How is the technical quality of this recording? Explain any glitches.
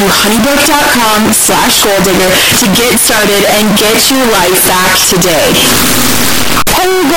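Poor: the speech is buried under loud, harsh distortion from start to end, likely from signed and unsigned mixed up on 16-bit samples. Flipping the top bit turns every zero crossing into a full-range jump, so pauses are as loud as speech, unlike clipping.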